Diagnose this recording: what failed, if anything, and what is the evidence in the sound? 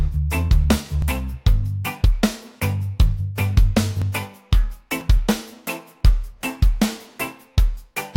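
A network or stream-playback fault: overlap between stream segments. Tiny skips fall at 1.02 s and 4.02 s, on 1.0 s segment boundaries. The player trimmed roughly 13 ms of sound it wrongly treated as duplicated, so the waveform jumps. A dropout would leave a silent gap instead.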